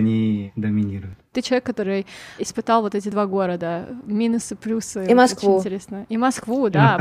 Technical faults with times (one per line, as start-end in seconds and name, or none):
1.13 audio missing between chunks
3.12 audio missing between chunks
5.10 audio missing between chunks